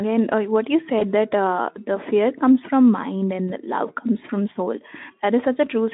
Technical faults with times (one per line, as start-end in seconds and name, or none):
0.99-1.04 VoIP packet loss concealed by the speech codec
3.48-3.51 VoIP packet loss concealed by the speech codec